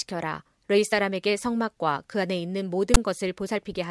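File tags played as audio, from 2.94 to 2.97 s: a block of text metadata is decoded as samples, so its character bytes come out as a loud, one-sided rasp that cuts into the speech with hard edges, then the zero padding that follows drops to silence.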